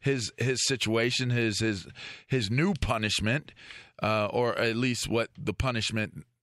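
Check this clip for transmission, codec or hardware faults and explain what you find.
One fault runs through the clip: clock slip clicks from 0.14 s to the end. Faint ticks recur roughly every twentieth of a second, blending into a soft rattle under the speech. The likely cause is two unsynchronised clocks drifting apart by something like 400 parts per million, so a single sample is dropped or repeated whenever the offset reaches a whole sample. A spectrogram shows evenly spaced thin vertical streaks. Zoomed in, the waveform has tiny one-sample kinks.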